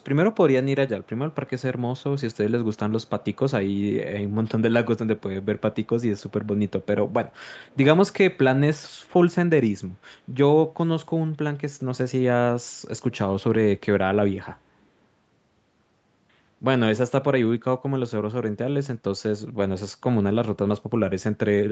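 An echo leak is the likely cause: a loudspeaker on the far side fed the speech back into its microphone, and the echo canceller let some of it through. A faint, delayed copy of the speech trails it by about 0.37 s, very low, roughly 35 to 40 dB beneath it, in scraps at 0.0, 1.03 to 1.62, 1.98 to 2.38, 2.75 to 3.37, 3.69 to 3.81, 6.19 to 6.86 and 7.31 to 7.77 s, within a band topping out at 8 kHz.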